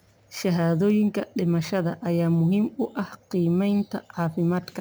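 Throughout, imaging from sample-and-hold upsampling adds a faint metallic fizz that tracks the speech. Repeating samples, which fits a rate raised from 24 kHz, mirrors the spectrum into 12 to 24 kHz, about 31 dB down. Spectrograms show an inverted reflection there; waveforms show tiny stair-steps.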